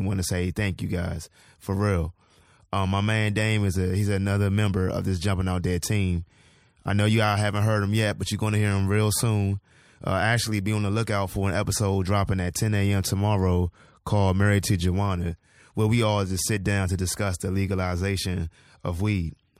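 There are no technical faults to describe in this speech at any point.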